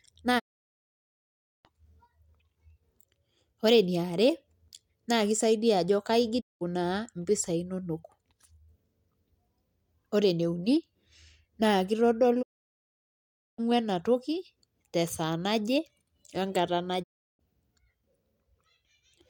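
Speech, with four digital broadcast dropouts where the receiver mutes after a 20 ms fade: 0.38–1.67 s, 6.40–6.63 s, 12.41–13.60 s and 17.02–17.41 s, each showing as a blank gap across the spectrogram and a flat waveform.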